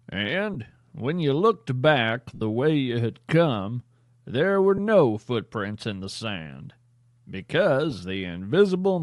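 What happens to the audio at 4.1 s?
At 4.1 s the speech has the same breathy, grainy edge heard across the whole clip: the upper frequencies sound hazy and hissy rather than crisp, and the damage is plainly audible. The likely cause is Bluetooth LC3 compression, the LE Audio transform codec. At a modest rate, around 48 kbps with short 7.5 ms frames by the sound of it, it discards much of the upper spectrum and fills those gaps with noise.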